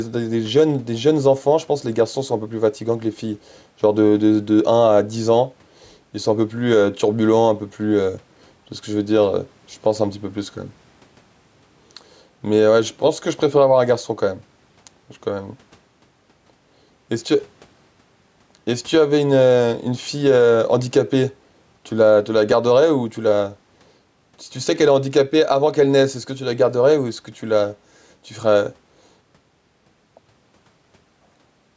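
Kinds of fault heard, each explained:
gain pumping: The level swings by around 5 dB, pulled down under louder speech, likely from gain set too high feeding a fast limiter.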